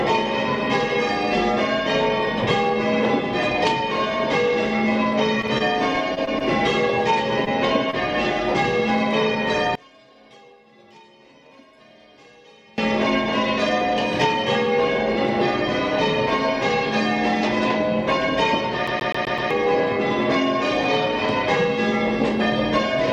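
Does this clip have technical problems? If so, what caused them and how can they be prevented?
Yes. From 5.41 to 6.43 s there is repeated packet loss, heard as robotic sound. Short holes keep arriving, the longest about 22 ms, and each is patched by extending the previous sound, so about a tenth of the stretch is synthetic. A spectrogram shows repeated smeared, flattened patches. A larger jitter buffer and network redundancy or forward error correction would prevent it.

Two brief instances of short concealed packet loss follow, at 7.45 to 7.48 s and 7.90 to 7.95 s. Each is about 20 ms of lost audio filled from the preceding signal, heard as a small smear or wobble. The waveform shows a slightly repetitive bump at each point. Steadier network paths or packet redundancy would prevent these.

From 9.75 to 12.78 s the level falls by about 29 dB, leaving a faint residue. The likely cause is one channel inverted, so the material shared by both channels cancels when the two are summed to mono. 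The waveform shows a sudden collapse in amplitude. Checking polarity and mono compatibility before release would prevent it.

From 18.87 to 19.51 s the CD is stuck on one turn. A 127 ms segment plays five times, with a tiny mute at each jump. The waveform shows identical short blocks tiled in sequence, with matching vertical seams in the spectrogram. Cleaning or replacing the disc, or ripping with error-checking software, would prevent it.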